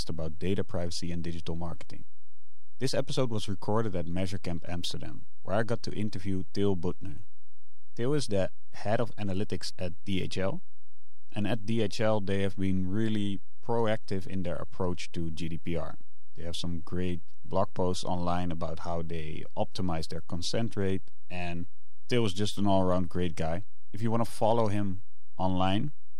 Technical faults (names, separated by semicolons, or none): DC offset; pre-echo